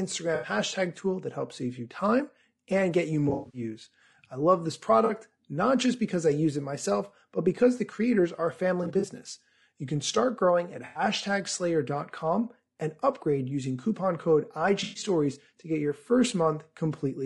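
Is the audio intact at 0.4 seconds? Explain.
No. AAC frame loss with concealment hits from 0.35 to 0.49 s: about 80 ms of coded audio never arrived, so the decoder rebuilt the gap from the last good spectrum with randomised or interpolated content, leaving a brief smeared, noisy, phasey patch in the speech.

Underneath that, the whole clip has the rough, grainy texture of low-delay AAC compression, likely AAC-ELD at around 32 kbps. Its short frames resolve pitch harmonics poorly, so noise fills the gaps between them and the top band sounds thin and synthetic.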